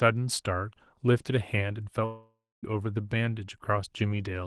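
Speech that drops out from 2.05 to 2.65 s: the last sound before the gap is stretched into a buzzy hiss that fades, the final 250 ms or so is near silence, and the speech resumes with about 580 ms of it simply gone. This is a long network dropout, likely a burst of lost packets that the call's concealment could only paper over. The audio is carried through an Opus call path, with a top end reaching about 12 kHz.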